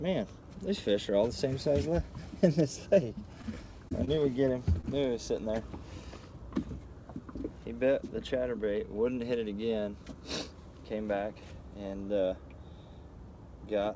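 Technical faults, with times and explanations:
3.42 to 3.55 s, short stall from a late packet: the jitter buffer ran dry, so about 17 ms of the last sound was stretched until the packet arrived, then playback resumed.
3.89, 4.05, 4.15 and 4.81 s, short concealed packet loss: four 20 ms gaps were each filled by extending the preceding sound, giving brief smears or wobbles rather than silence.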